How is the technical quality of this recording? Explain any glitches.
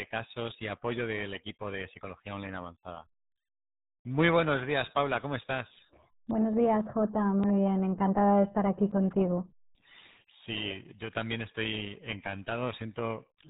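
The quality is poor: the whole recording has passed through the RealAudio 14.4 codec, and the damage is heavy from start to finish.

Throughout, the speech is muffled and gargly, with everything above about 3.8 kHz gone. That narrow band and the smeared, bubbling texture point to an 8 kbit/s dial-up-era coder, which keeps only a coarse model of each short stretch of sound and rebuilds the rest approximately. On a spectrogram the energy stops at a flat ceiling near 3.8 kHz with empty space above, and the harmonics below look blotchy and unstable rather than clean. The waveform looks rounded and softened.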